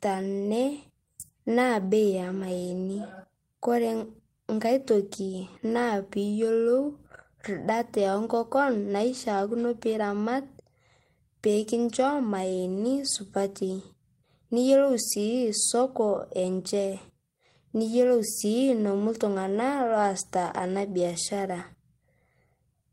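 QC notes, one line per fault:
Nothing stood out on listening to this speech recording.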